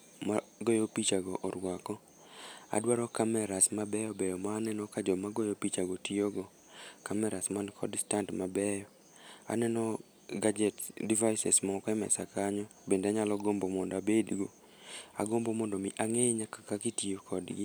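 No technical faults are audible.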